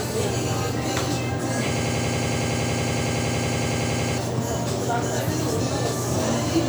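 From 1.77 s to 4.18 s the sound locks into a rapid, mechanical stutter: a fragment about 93 ms long repeats identically, roughly 11 times per second, like a machine gun. This is a system hang loop. The computer or its audio driver stalled while the sound hardware kept replaying the same ring buffer, which fits a 4096-sample buffer. About two seconds of the original audio never arrived and are replaced by these repeats.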